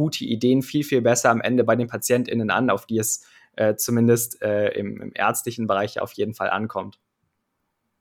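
Nothing in the speech stood out as a technical problem on listening.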